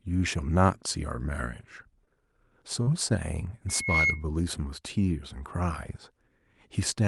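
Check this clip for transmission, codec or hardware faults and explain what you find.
Two kinds of fault are present in the speech: two brief dropouts covered by concealment, and a burst of feedback.

At 2.05 to 2.09 s, and again at 2.83 to 2.89 s, the speech briefly smears and wobbles, as if it stuck for an instant before resuming. This is short concealed packet loss. About 20 ms and then about 40 ms of audio failed to arrive in time. The decoder extended the preceding sound across each gap and crossfaded back into the real signal.

From 3.68 to 4.25 s a steady whistle at 2.2 kHz rises over roughly a third of a second and then sits about 5 dB above the speech. This is loudspeaker feedback squeal. A microphone was picking up the loudspeaker it feeds, and at that frequency the loop gain went above one, so the tone kept reinforcing itself until it was checked.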